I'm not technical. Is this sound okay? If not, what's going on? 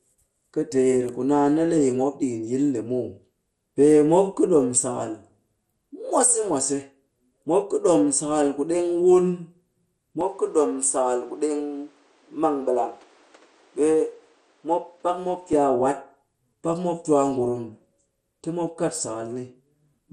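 No. Throughout the recording the speech sounds dull, with a gurgling, grainy roughness on the voice, like a weak digital radio station. That is most likely MP2 compression, an older way of shrinking audio files. When it is squeezed too hard, it drops the brightest parts of the sound (nothing remains above about 14.2 kHz) and stores what is left so coarsely that it turns grainy.

From 10.21 to 15.53 seconds the voice turns duller and more muffled, and a faint new background noise appears underneath it. The volume stays about the same and there is no gap at either change. This points to the input switched to a poorer device, likely a different microphone or a headset, for that stretch. That device cuts off everything above about 10.5 kHz and adds its own noise.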